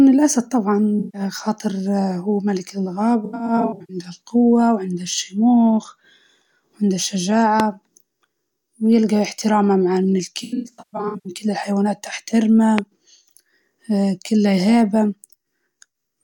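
At 0.99 s the AAC stream drops a short run of frames, roughly 150 ms in total, and the decoder conceals the gap by rebuilding it from the last good spectrum. The result is a brief smeared, noisy patch in the speech until 1.21 s. From 3.25 to 3.97 s a longer stretch of AAC frame loss with concealment sets in. About 380 ms of audio is lost in bursts spread over 640 ms, the longest around a tenth of a second. The speech turns phasey and washed out in flickering patches just before "جوة وشموخ". At 7.6 s a loud pop lands on top of the speech, a single sharp hit roughly 15 dB above the signal, while the speech carries on underneath. The likely cause is a sudden voltage step, such as a switch, plug or static discharge, entering the chain. The worst AAC frame loss with concealment runs from 10.43 to 11.33 s. There, about 550 ms of audio goes missing in scattered bursts across 810 ms, the longest near 150 ms, leaving the speech smeared and hollow in repeated patches. 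A second pop, also roughly 15 dB above the signal, follows at 12.79 s.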